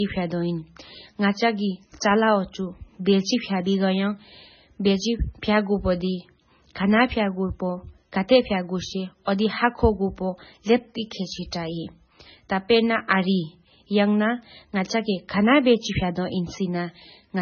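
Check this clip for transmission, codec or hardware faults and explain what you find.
One fault runs through the whole 17-second speech clip: MP3 compression. From start to finish the sound is watery and swirly, sibilants break into metallic chirps, onsets smear, and nothing is present above 6.6 kHz. The damage is heavy and is likely from MP3 encoding starved of bits, consistent with a bitrate near 16 kbps. With so few bits, the encoder cuts the treble at a fixed point and zeroes weaker frequency lines, which flicker on and off between frames and cause the swirling.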